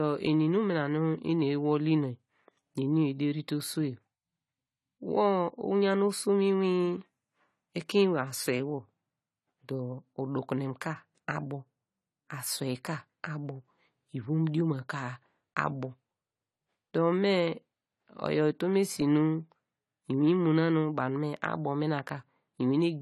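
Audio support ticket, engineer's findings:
Throughout the speech: likely AAC compression, consistent with low-bitrate AAC-LC around 32 kbps. Nothing above 14 kHz, coarse spectral quantisation, so the sound is dull and smeared, with sibilants warbling audibly.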